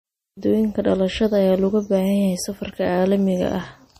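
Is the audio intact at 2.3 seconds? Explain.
No. At 2.3 s, as throughout, the speech sounds watery and swirly with nothing above 15.1 kHz, likely MP3 compression at a low bitrate near 40 kbps; a spectrogram shows a flat ceiling and flickering gaps.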